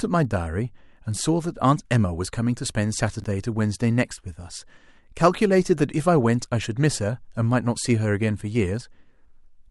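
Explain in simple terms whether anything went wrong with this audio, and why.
Chunks out of order, at 3.20 to 3.24 seconds: one 20-millisecond slice of the speech arrived one slice late and played after the piece meant to follow it. Nothing is missing, but the swapped order and abrupt joins make a brief jumbled moment.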